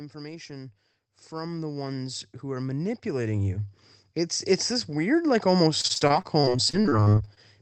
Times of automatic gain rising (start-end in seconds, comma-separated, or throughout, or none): 0.11-3.74